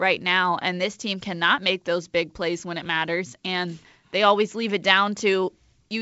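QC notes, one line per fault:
No faults heard anywhere in this speech clip.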